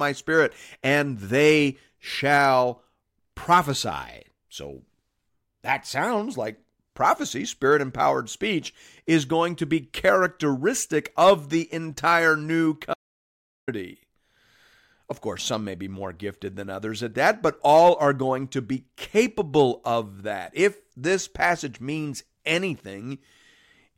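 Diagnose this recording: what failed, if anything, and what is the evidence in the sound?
The speech drops out to silence from 12.94 s to 13.68 s, losing about 0.74 s. The gap is silent, with no room tone or noise floor, which separates it from a noise gate closing. It is likely an input-side dropout, such as a lost device link or momentary mute, while recording continued writing zeros.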